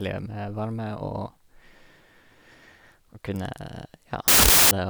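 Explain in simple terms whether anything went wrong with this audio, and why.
Near the end of this speech clip, from 4.28 to 4.71 seconds, the playback system made a fault known as samples built from the wrong bytes. Each sample of digital audio is stored as several bytes, and here the reader put them together incorrectly, so the tiny, fast-flickering detail in each sample was treated as if it were the main signal. For those four-tenths of a second, the speech is replaced by a loud burst of harsh noise.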